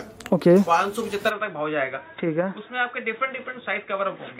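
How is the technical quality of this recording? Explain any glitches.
The recording degrades partway through. From 1.30 s to the end, the input switched to a poorer device, most likely a change of microphone or headset profile. The band stops at about 3.8 kHz, so the sound turns dull and boxy, drops a few decibels, and gains a faint new noise floor, with no gap at the changeover.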